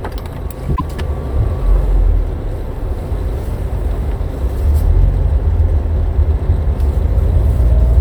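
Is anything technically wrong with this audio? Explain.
Yes, there's one glitch near the start. From about 0.72 to 0.82 s there's damaged data in a compressed stream: a short burst of the encoded file got corrupted, so the decoder misread those frames, lost sync, and had to hunt for the next valid frame header before it could carry on. What you hear is a brief glitch lasting roughly a tenth of a second.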